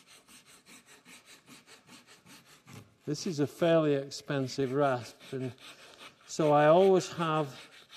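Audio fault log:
2.39–4.62 s drift correction step: playback slows 5.7% and drops 102 cents (about a semitone), then snaps back. It is one steady step, not wavering wow, likely from a clock-matching rate jump.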